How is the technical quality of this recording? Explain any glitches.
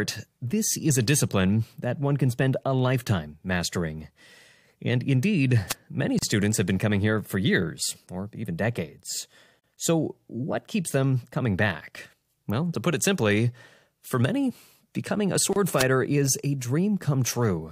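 The recording has four glitches: one burst of radio noise and three brief dropouts where the speech stops and resumes.

At 5.69 to 5.74 s, just before "many students have been", a short swish of static lasts about 50 ms. This is a wireless microphone noise hit. The analogue FM radio link faded as reflected signals cancelled the direct one, so the receiver's own noise rose and briefly rushed up over the speech before the signal recovered.

Three times the speech cuts to near-silence and picks up exactly where it stopped: at 6.19 s for about 37 ms, at 9.60 s for about 42 ms just after "years or even decades", and at 15.53 s for about 30 ms just after "for many becoming a". Each is a gap at a join of encoded pieces. The audio was encoded in separate segments and joined without trimming, so each segment's start-up delay and padded final frame stayed in as dead air. The codec softens the edges of each gap, so the truly silent part is shorter than the full dropout.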